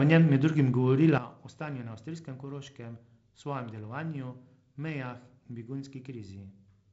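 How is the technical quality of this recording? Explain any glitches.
The recording has one clear glitch: a sudden gain jump at 1.18 s. From that instant to the end, the speech and its background noise drop together by about 12 dB, with no fade between the two levels. The level most likely changed abruptly in the digital chain, for example a gain setting or bit shift applied without a ramp. Because everything steps down at once, the rest of the clip sounds distinctly quieter. The speech is carried over G.722 wideband coding, with nothing above 7.7 kHz and a slightly noisier lower band that fits the 48 kbit/s mode.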